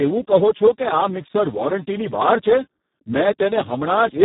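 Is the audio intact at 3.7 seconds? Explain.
No. At 3.7 seconds the speech carries Speex codec damage, present throughout the clip. The sound fits a very low setting near 4 kbps, leaving few bits for excitation. The speech sounds hoarse and noisy, with nothing above 3.9 kHz.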